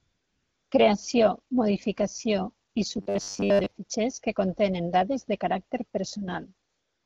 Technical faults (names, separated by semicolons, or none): AMR comfort noise; robotic sound from repeated short buffers